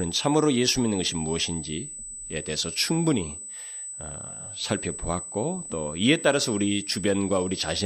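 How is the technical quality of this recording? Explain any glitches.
The recording is compromised by a continuous high-pitched tone under the speech. USB whine runs through the whole clip as a steady 8 kHz tone, about 10 dB below the speech. Current drawn in 125-microsecond USB microframes leaks through power or ground, producing this fixed-pitch whistle.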